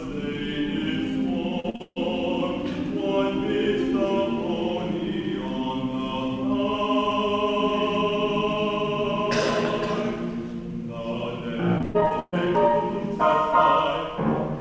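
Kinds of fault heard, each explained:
Repeated packet loss (robotic sound): Audio packets went missing again and again in quick succession. Each hole was patched by stretching the last bit of sound, and then the next loss arrived. This happens from 1.60 to 1.98 s and again from 11.78 to 12.50 s. More than half of each stretch is patched, with single gaps up to 141 ms. The sound turns choppy and robotic, with pieces missing, over the dull G.722 call sound that stops at 8 kHz.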